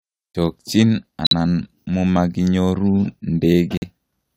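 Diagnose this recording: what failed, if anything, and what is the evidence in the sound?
Corrupt frame muted at the codec stage: the decoder rejected damaged compressed frames and the player substituted silence. The speech cuts out abruptly at 1.25–1.33 s and 3.77–3.84 s, holes that fit about three frames each, with timing intact.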